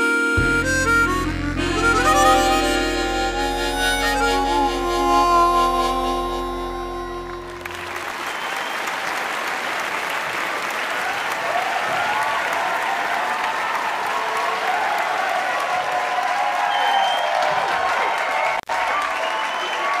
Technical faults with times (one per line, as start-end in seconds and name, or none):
18.56-18.72 intermittent contact